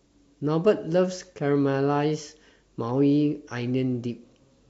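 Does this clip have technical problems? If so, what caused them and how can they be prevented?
No, there are no technical problems to hear in this clip. Since nothing has gone wrong, there is no cause to trace and nothing to prevent.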